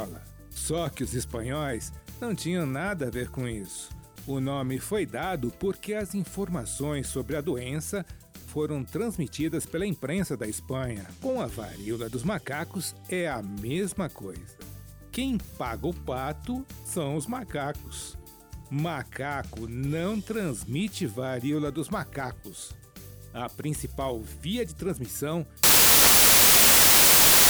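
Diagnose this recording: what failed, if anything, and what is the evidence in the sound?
The failure is in sample-format conversion: samples built from the wrong bytes. From 25.63 s to the end of the clip at 27.49 s, the sound is replaced by loud, harsh broadband noise. The reader is assembling each sample from misaligned or misordered bytes, so the rapidly changing low-order bits land in the high-order positions and dominate every value.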